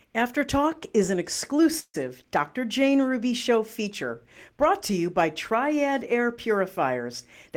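Speech with a call audio freeze from 1.79 to 1.96 s, after "is an": the last sound smears into a fading buzz, then about 50 ms of silence before speech resumes intact. The likely cause is a stalled jitter buffer. A spectrogram shows flat, blurred horizontal bands decaying into a blank strip.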